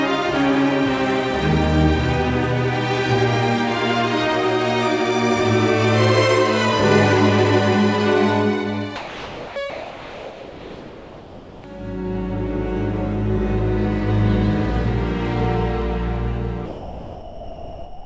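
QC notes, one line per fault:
8.96–9.56 s, 9.70–11.64 s and 16.66 s to the end, sound dropped by the voice detector: the sound gives way to a flat, steady hiss and, in the first two gaps, returns only when the hiss stops. About 0.6 s is lost in the first gap, about 0.94 s in the second, and about 1.4 s in the third, which runs to the end of the clip. The likely cause is a sending voice detector that judged this sound to be background and stopped transmitting, so the receiver filled each gap with comfort noise.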